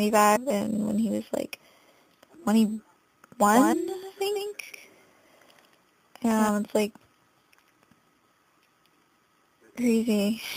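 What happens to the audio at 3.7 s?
At 3.7 s two faults overlap. A doubled audio track runs from 3.53 s to 6.49 s: a second, full-band copy of the sound trails the original by roughly 150 ms, about 5 dB quieter. It is likely a second capture through a slower path or two misaligned copies in an edit. Unlike an echo or room reverb, the copy has no decay or room colour, and it starts and stops abruptly.

Inside that span, from 3.72 s to 3.74 s, compressed frames are skipped. Whole frames of encoded audio never reach the output, so the sound jumps ahead by roughly 50 ms. Material is simply missing, with no pause.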